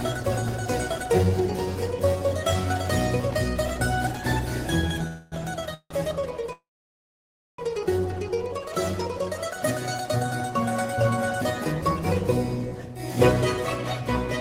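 Three call audio freezes interrupt the audio. From 5.07 to 5.34 s the last sound is stretched into a fading buzz or hiss for about 245 ms. From 5.74 to 5.92 s a similar 166 ms fill ends in about 50 ms of silence. From 6.52 to 7.60 s the fill fades into about 950 ms of silence. Each time playback resumes where it stopped, with nothing skipped, so the rest of the audio arrives later. The likely cause is delayed packets draining the jitter buffer.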